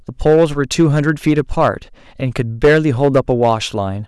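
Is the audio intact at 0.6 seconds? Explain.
No, hard clipping runs throughout: speech driven about 9 dB too hot has about 3 percent of samples sliced flat, giving harsh crackle, flat-topped waveform peaks and high-frequency spectrogram smearing.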